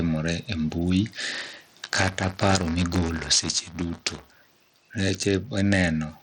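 From the start, the faint room noise sits about 41 dB below the speech, and the gain swings by about 10 dB, squashing loud and soft parts closer together. This is gain pumping, likely from gain set too high into a fast limiter.

Throughout, the treble flickers and drops away, with a gritty, aliased edge on the speech. This is Bluetooth SBC compression, likely at a bitrate around 80 kbps that starves the upper sub-bands.

From 1.33 s, just after "e mbui", to 4.80 s, a robotic 172 Hz buzz rides on the speech. This is buffer tearing: a small slice of each period replays audio roughly 10 ms old with hard joins, which fits a 256-sample buffer.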